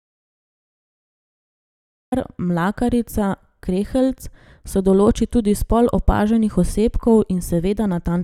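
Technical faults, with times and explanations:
0.00–2.12 s audio dropout to silence: the speech clip opens in silence with no room tone, likely an input lost while recording continued, then cuts in abruptly.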